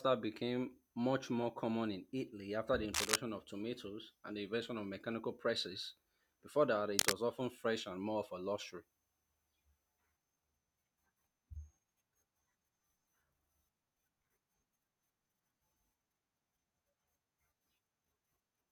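Two short bursts of harsh, uneven scratching cut across the speech, from 2.93 to 3.16 s just after "after the" and from 6.97 to 7.15 s just before "often fresh and more", each a little louder than the speech itself. This is cable scratch noise, likely from a worn cable or connector being moved.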